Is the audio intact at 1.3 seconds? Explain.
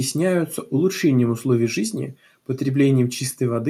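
Yes, the audio is intact at 1.3 seconds, with no dropout, click, distortion or other fault to be heard at that moment.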